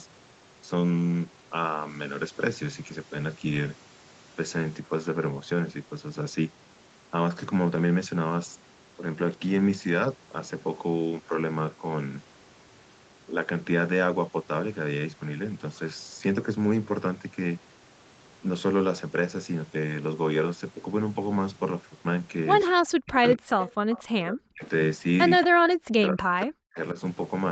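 From 22.7 to 23.47 s the speech sinks sharply, by roughly 40 dB at its deepest. This is likely speech suppressed in double talk: with both ends talking at once, the echo canceller could not tell this talker apart from its loudspeaker echo and pulled the whole signal down while the far side spoke.

At 23.6 to 23.7 s a faint repeat of the speech surfaces, about 15 dB below the talker, trailing it by 231 ms. A second, weaker scrap of the same echo, about 20 dB down and at the same 231 ms delay, follows from 23.91 to 24.04 s. Both are likely echo leak: a loudspeaker end's canceller missed part of what its microphone caught and sent that delayed copy back.

Between those two echoes, from 23.75 to 23.87 s, the room tone drops away by about 40 dB for roughly a tenth of a second and then returns. This is background gated by the echo canceller, which clamped the microphone hard while the loudspeaker was playing and let go again moments later.

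The double-talk suppression returns twice. From 24.24 to 24.64 s the speech dips deeply again for around 400 ms. From 25.43 to 26.78 s it dips once more, by roughly 40 dB at the deepest point, across about a second in total. The canceller is likely again ducking the near talker while the far side is talking. Through all of this the call codec path keeps the audio confined below 8 kHz.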